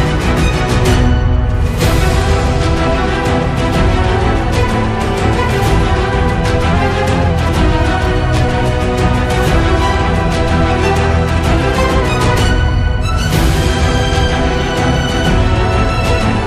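From 6.74 to 7.30 s and again from 11.51 to 12.02 s, the sound runs 5.8% fast and rises about 98 cents, nearly a semitone, then snaps back. This is likely a drift correction step, where clock-matching software briefly changed the playback rate to rebalance its buffer.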